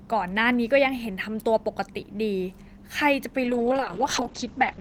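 Right at 3.45 s you get a call bitrate drop that runs to the end of the clip. The encoder gets squeezed from 32 kbps down to 8 kbps and stays at the floor for the last 1.36 s or so. With that few bits it codes the speech much more coarsely and pulls the audio bandwidth in from 20 kHz to 8 kHz, so the voice suddenly goes muffled and a bit rough and watery, and never recovers before the clip ends.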